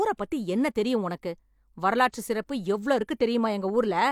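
No technical fault can be heard anywhere in the recording, and the signal holds steady throughout.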